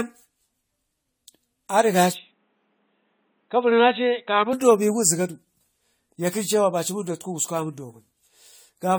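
From the start and across the whole clip, the speech has a swirly, smeared, hollow quality with blurred consonant attacks. This is generation loss, likely from repeated AAC-LC encoding at 64 kbit/s, around five passes. On a spectrogram, the high bands look patchy with flickering holes, and the waveform shows softened transients.

From 2.13 s to 4.53 s the sound turns duller, boxier and about 5 dB quieter, with a faint new background hiss about 45 dB below the speech. This is an input switched to a poorer device, likely a lower-quality microphone or headset profile. The spectrogram shows a hard ceiling near 3.9 kHz across that span, and no silent gap at either switch.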